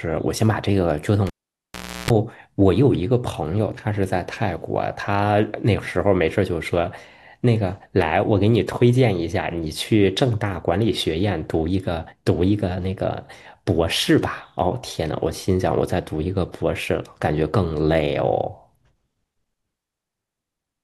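At 1.27 s, cable pulled and plugged in: a pop, 0.78 s of near-flat waveform containing 0.33 s of 60 Hz mains-buzz stripes, then another pop at 2.10 s.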